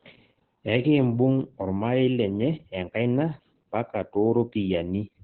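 Throughout, heavy Opus voice compression muffles and roughens the speech, consistent with narrowband SILK near 8 kbps; a spectrogram shows content cut off around 16.3 kHz.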